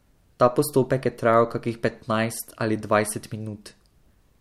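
No dropouts, clipping, distortion or other technical faults are audible anywhere in this short speech recording.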